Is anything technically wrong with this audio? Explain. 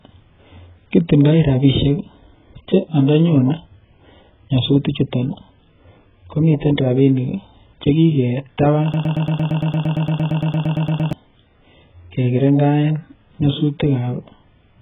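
Yes, there are two faults.

Throughout, the speech shows AAC compression damage, likely from AAC-LC at a very low bitrate, around 8 kbps. The coder discards detail to meet the bitrate, so nothing survives above 3.8 kHz, and sibilants turn fizzy and warbling. That swirling texture separates it from a plain low-pass filter.

From 8.94 to 11.13 s there is a broken-record loop, likely a stalled player or stream resending its last buffer. A 0.11 s fragment repeats exactly, back to back, about 19 times, and the audio that belonged there is lost. Identical copies at full level distinguish it from a decaying echo.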